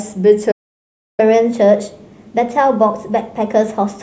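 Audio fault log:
0.51–1.20 s: playback stall, the speech cuts out for about 0.67 s mid-flow, likely because the player ran short of data, then resumes where it stopped.
1.20–4.03 s: catch-up at higher speed, the backlog is resampled at 1.1x, so the speech runs faster and sits about one and a half semitones sharp until the end.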